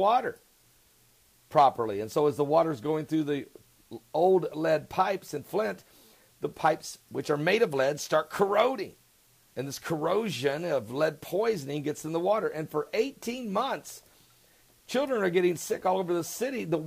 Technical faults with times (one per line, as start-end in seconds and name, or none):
0.00-16.86 low bit depth with dither